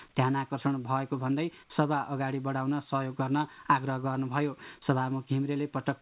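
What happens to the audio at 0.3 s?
Nothing goes wrong at 0.3 s: the audio there is intact, carried through the WebRTC call path, whose G.711 A-law coding leaves nothing above 4 kHz.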